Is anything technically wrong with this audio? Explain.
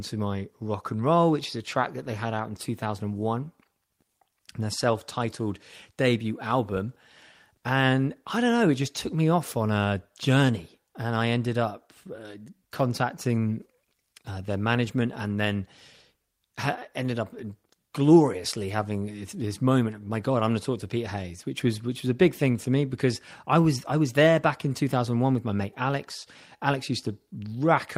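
Yes, there's a timing problem running through this speech clip.

Clock drift between sender and receiver is present the whole way: the sender's clock runs slow, by something like one and a half percent. The receiver's jitter buffer keeps draining, so it has to stretch the audio to keep up.

Repeated timing corrections show up from about 0.28 s to 27.6 s. The receiver keeps repeating short slivers to fill the gap, which slows playback to 98% and adds roughly 0.4 s overall. The edits are small and unevenly spaced.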